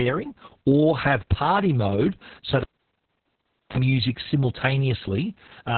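From start to finish the speech sounds muffled, hoarse and slightly robotic, with nothing above 4.2 kHz. This is heavy Opus voice compression: the SILK linear-prediction coder runs narrowband and codes the excitation coarsely, which fits a bitrate around 6 kbps.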